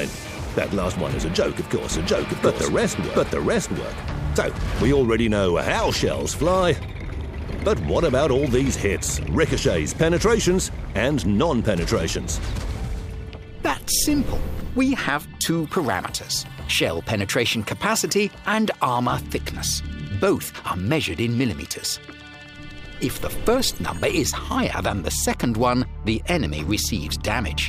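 From 1.91 to 4.99 s, a doubled audio track: a second, equally loud copy trails about 0.7 s behind, likely from a slower capture path, showing as repeated waveform shapes with hard edges.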